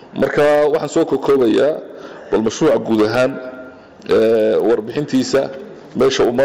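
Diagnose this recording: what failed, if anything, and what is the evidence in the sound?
The fault is in the sample-rate conversion stage: the resampler restarted on every block. A steady 20 Hz tick, one per 50 ms block, runs throughout and stops in silence, because each block's edges were interpolated without their neighbours. Unlike underrun clicks, no audio is lost and the spacing never varies.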